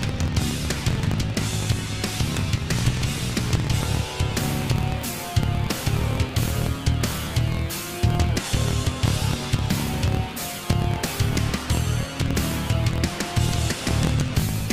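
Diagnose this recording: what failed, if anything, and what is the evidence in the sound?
Block size mismatch (truncated) in buffering. A 43.1 Hz buzz runs throughout, and sound plays 1.12 times fast. Block tails are cut, fitting 1024-sample reads.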